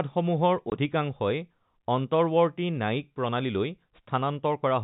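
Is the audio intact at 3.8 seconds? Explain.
Yes, the speech at 3.8 seconds is intact, with nothing interrupting or distorting it beyond the narrow, telephone-band character of its G.711 coding.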